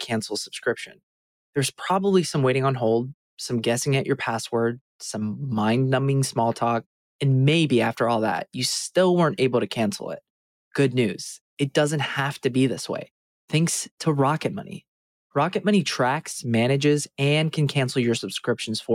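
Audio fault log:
0.86–1.01 s, sound cut by the noise suppressor: the audio sinks, dipping by about 21 dB at its lowest for roughly 150 ms before returning. The suppressor mistook this stretch for background noise and pulled its level down far harder than the surrounding material.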